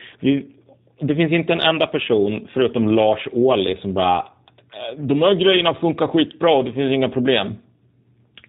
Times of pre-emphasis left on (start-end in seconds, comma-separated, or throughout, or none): none